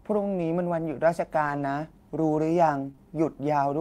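From 1.45 to 1.63 s there is a lost packet rebuilt from error correction. It spans a run of lost packets. Each lost piece was replaced by a low-bitrate copy carried in the following packet. So the sound never drops out. It turns grainy and noisier for about 100 ms of rebuilt audio. The same happens briefly from 2.87 to 2.89 s, a single 20 ms rebuild with the same rough texture.

Right after, two short concealed packet losses follow back to back. The first runs from 2.91 to 2.95 s, the second from 2.96 to 2.99 s. Here no copy arrived in time. The decoder extended the preceding sound for 21 ms and then 17 ms, and blended back into the real signal. The result is a quick smear or wobble.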